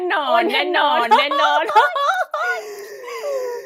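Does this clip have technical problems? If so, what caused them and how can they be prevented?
Yes. The clip has a doubled audio track throughout. Every part of the speech comes back a second time, roughly 0.7 s later, at about the same level as the original. The copy is full-band and clean, with no decay or room colour, so it is not an echo. The likely cause is the same signal reaching the mix twice, through a second, slower capture path or two misaligned copies left in an edit. To prevent it, route each source into the mix only once and check the edit for stacked duplicate tracks.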